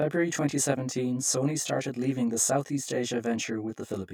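Speech that sounds rough and slightly doubled for the whole clip. The fault is channel delay (comb filtering): one channel trails the other by around 20 ms, and when the two are summed to mono the shared content cancels at evenly spaced frequencies. The first notch falls very low, near 20 Hz, and closely packed notches continue up through the spectrum.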